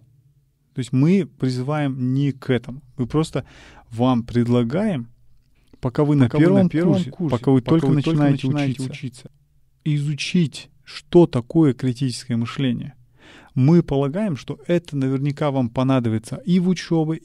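From 6.17 to 9.27 s a doubled audio track appears: a full-band copy trails roughly 0.4 s behind, a few dB quieter, likely from a second, slower capture path. Unlike an echo, it has no decay or room colour and starts and stops abruptly.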